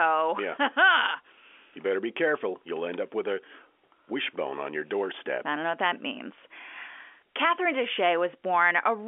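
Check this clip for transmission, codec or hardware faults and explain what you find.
Nothing is amiss here: the speech comes over ordinary G.711 telephone coding, its band held to about 300 Hz to 3.4 kHz with at most a faint coding noise following the level, which is how that line format normally leaves it.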